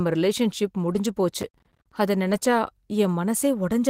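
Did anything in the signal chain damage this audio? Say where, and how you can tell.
Yes. Twice the network dropped packets and the codec's in-band forward error correction covered them: a lost packet rebuilt from error correction at 0.85–0.99 s and again at 2.27–2.37 s. The sound never drops out but turns rougher and noisier for about 80 ms and 60 ms. That fits runs of about four and three packets rebuilt from low-bitrate copies. On a spectrogram those stretches show blurred harmonics and a raised noise floor. The waveform stays continuous, with no gap.

At the driver or buffer stage, processor overload crackle runs from 1.41 to 1.92 s as a gritty burst riding on the speech. The processor kept missing its deadlines for roughly 10 ms buffers, around thirty of them across that half second, and each missed buffer went out as silence. The waveform shows a comb of short hard-edged dropouts to silence. 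On a spectrogram each edge appears as a thin vertical broadband streak, stopping when the load clears.

Just after the second rebuild comes a short concealed packet loss at 2.39–2.43 s, another network fault. About 20 ms of audio never arrived, and the decoder filled about 14 ms by extending the preceding sound before blending back into real audio. It is heard as a brief smear or wobble. A spectrogram shows the preceding sound stretched flat for a moment, and the waveform shows a soft crossfade back into the real audio.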